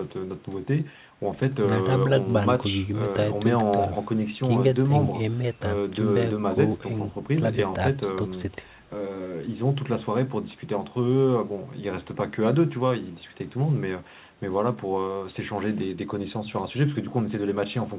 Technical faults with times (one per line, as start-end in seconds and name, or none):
none